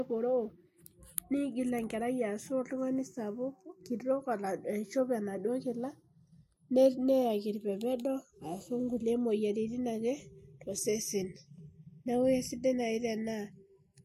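Throughout, the channels drift apart: clocks differing by roughly 30 ppm slide the inter-channel delay toward roughly 0.4 ms, so a mono sum sweeps comb notches, heard as slow flanging on the speech.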